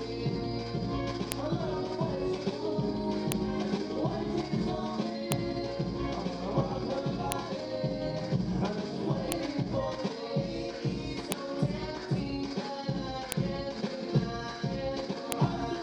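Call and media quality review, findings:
File header played as audio: sharp loud clicks at 1.32, 3.32, 5.32, 7.32, 9.32, 11.32, 13.32 and 15.32 s. Joining stage is passing WAV headers through as samples at each 2 s piece. Unlike random packet-loss clicks, these are strictly periodic and ignore the signal.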